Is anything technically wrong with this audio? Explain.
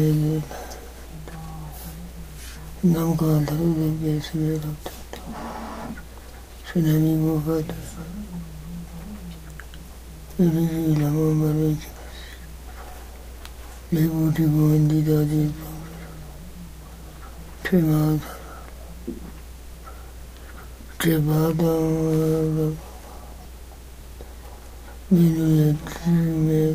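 Yes. Mains hum, a steady low 60 Hz tone, runs under the sound throughout at roughly 20 dB below it, from power-line coupling via a ground loop or nearby transformer.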